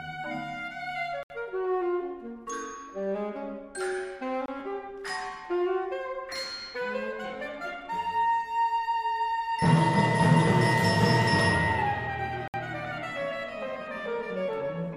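Blocks of digital silence appear at 1.23 s (about 70 ms), 4.46 s (23 ms, which fits one missed 1024-sample buffer) and 12.48 s (about 62 ms). Output drops straight to silence and returns without a fade, so each gap is a short hole.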